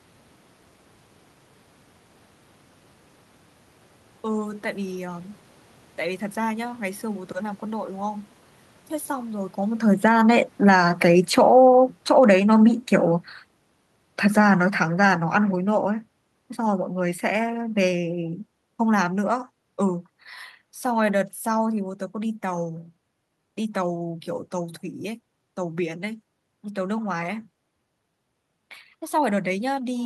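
From 9.89 s to 21.88 s the automatic gain falls: the gain control treats the input as too loud, or its background noise as too strong, and pulls its gain down by about 20 dB gradually. The speech and the room noise behind it sink together, unlike the level shift around 9.5 s where the talker moves.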